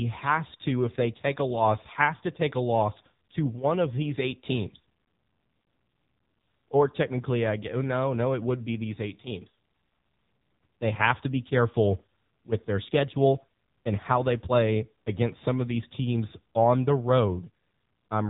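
Speech passed through an AMR narrowband mobile codec throughout. Nothing above 3.8 kHz survives, and heavy coding makes the voice buzzy and synthetic, which fits a low rate near 6.7 kbps. A plain telephone-band filter would cut the top without that pulse-driven, rebuilt buzz.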